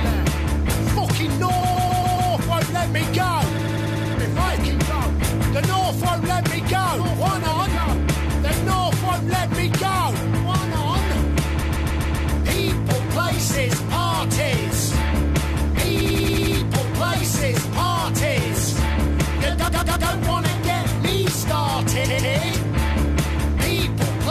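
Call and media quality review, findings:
Repeated frames: a block of compressed frames was written or delivered more than once, so the decoder replays it. Heard as a rhythmic stutter at 1.60–2.30 s, 3.58–4.14 s, 11.61–12.31 s, 16.00–16.56 s, 19.67–20.09 s and 22.04–22.32 s. Looped block is 139.3 ms (consistent with six frames) or 92.9 ms (four), replayed two to six extra times, adding 0.28–0.70 s each.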